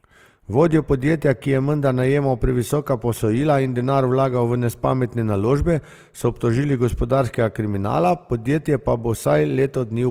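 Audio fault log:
Throughout, Opus compression: the speech keeps its full bandwidth but sounds plainly grainy and rough, with a noisy texture on voiced sounds. The likely cause is the codec's music mode filling bit-starved bands with folded or noise content, which fits a bitrate near 24 kbps.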